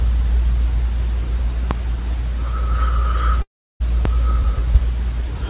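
At 1.71 to 1.75 s there's a loud pop, a single sharp hit roughly 15 dB above the sound, which keeps running underneath it. It's most likely a voltage spike entering the chain, from a plug, a switch, static or a driver hiccup, that the downstream circuitry then shaped into a short thump. The same kind of pop returns at 4.05 to 4.09 s, again a single click about 15 dB over the audio, and probably from the same sort of electrical glitch.

Between them, from 3.42 to 3.82 s, you get a long network dropout. Roughly 0.38 s of audio simply never arrived, likely because packets were lost or held up on the way. The receiver tries to cover the gap by stretching the last bit of sound into a fading buzz, but that gives out quickly, and most of the gap, about a third of a second, is just silence. When the audio resumes, it picks up further along, and the missing stretch is gone for good.

Across the whole clip the call codec passes nothing above 4 kHz, which fits a narrowband G.711 link at 64 kbps.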